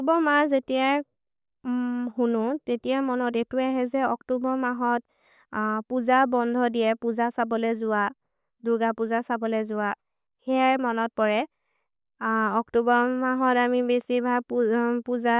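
No technical faults can be heard anywhere in the recording, which carries the speech without any interruption or damage to the signal.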